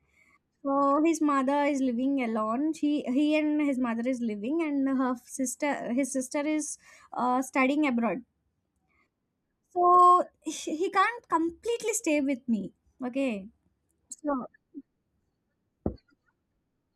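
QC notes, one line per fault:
No fault to note in this speech clip.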